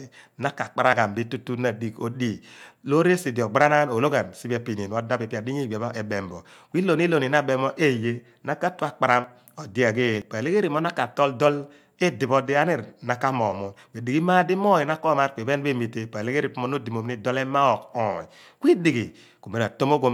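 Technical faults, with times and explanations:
0.93 s, 9.24 s and 10.22 s, dropped buffer (overrun): at each point the speech jumps straight ahead with no gap, losing roughly 20 ms at the first two and about 50 ms at the third. The likely cause is the recording side failing to collect a buffer before it was overwritten. Unlike an underrun dropout, no silence is inserted; the audio simply skips.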